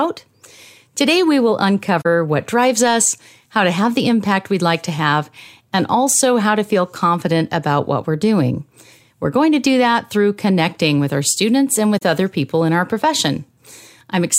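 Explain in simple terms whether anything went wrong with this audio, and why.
Two short gaps appear in the speech: one from 2.01 to 2.06 s, between "we will" and "what drives us how", and another from 11.98 to 12.03 s, between "with our students and" and "other people in our". Each lasts about 43 ms, consistent with two lost blocks of compressed audio. This is AAC frame loss with muting: the decoder had nothing to play for those blocks, so it output silence. Its overlapping blocks fade the sound down and back up, making soft-edged holes.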